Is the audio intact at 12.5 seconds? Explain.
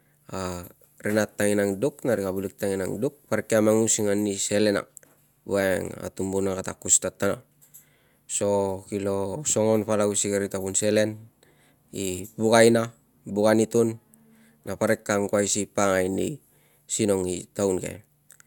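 Yes, the speech at 12.5 seconds plays through intact, with no audible fault at that moment.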